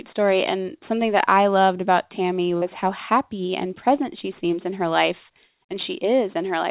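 Short concealed packet loss occurs three times: at 1.27 s, between "something that" and "I loved about"; from 2.57 to 2.63 s; and from 3.47 to 3.49 s, just before "and present she seems". Each time, a few hundredths of a second of audio arrived too late, and the receiver patched the gap by extending the preceding sound before blending back. The first and last are brief. The middle one, roughly 40 ms, is a longer smear, heard through the call's narrowband path, which has nothing above 4 kHz.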